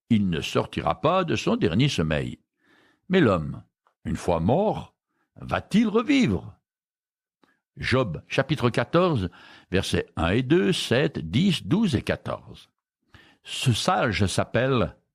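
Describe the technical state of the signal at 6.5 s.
At 6.5 s the signal is intact, with no audible fault at that point.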